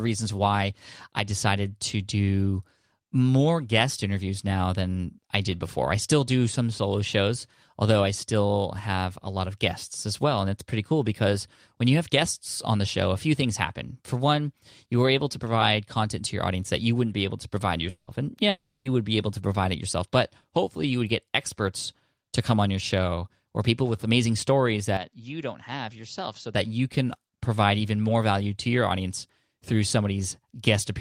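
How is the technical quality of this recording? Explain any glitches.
The recording has three audible glitches: two dropouts close together and a short stretch where the sound quality changes abruptly.

At 17.89 to 18.10 s, right after "be able to provide", there is a long network dropout. The likely cause is a run of audio packets that never arrived, so the receiver filled the gap by extending the last sound as a fading buzz for about 180 ms, then went silent for the final 50 ms. On a spectrogram this looks like a smeared, decaying band followed by a dark gap. A second dropout at 18.49 to 18.88 s, just before "would be able to", follows the same pattern over 360 ms, with the last 260 ms fully silent. In the waveform it shows as a tapering smear and then a flat line. The missing sound simply never returns.

From 24.97 to 26.55 s, between "people with amazing stories" and "you can provide even", the input switched to a poorer device, likely a fallback microphone or a headset's call mode. 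There is no gap at the change. Instead the sound turns duller as everything above 7.6 kHz disappears, and the level drops by about 10 dB over a faint new noise floor. On a spectrogram the upper band cuts off sharply at that frequency, and in the waveform the envelope visibly shrinks for the duration.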